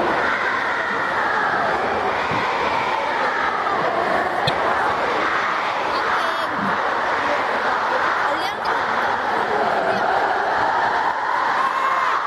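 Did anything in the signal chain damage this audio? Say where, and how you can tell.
Yes. Damaged data in a compressed stream at 4.45 to 4.49 s and 8.63 to 8.67 s. Corrupt codec frames break decoder sync, leaving brief 40 ms disruptions in the sound.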